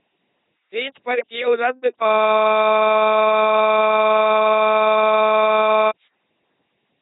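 From the start, the whole clip runs through an LPC-10 vocoder, and the damage is heavy. Every instant gets forced to either buzz or hiss through a crude ten-pole filter, so you hear a mechanical robot voice with nothing above 3.9 kHz, which fits a 2.4 kbit/s stream.

Then from 2.08 to 5.91 s there's a system hang loop. The machine froze while the audio hardware kept replaying one 40 ms chunk of its buffer, so that slice repeats about 96 times at 25 Hz, coming across as a rough, steady buzzing stutter.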